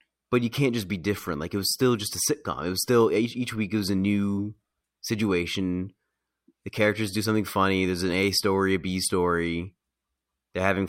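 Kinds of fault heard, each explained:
No kinds of fault are heard in this speech clip.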